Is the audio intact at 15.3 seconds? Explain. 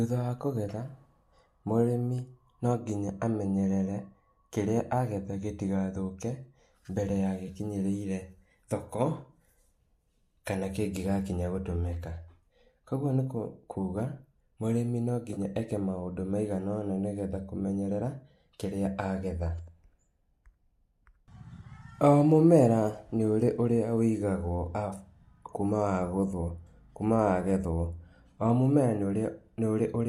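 No, there's an AAC frame loss with concealment from 15.34 to 15.39 s, right after "nikũ kuga mũrĩmi" and before "eke maũndũ maigana". About 30 ms of audio went missing, and the decoder patched it from the last good spectrum, so you hear a brief smeared, noisy blip.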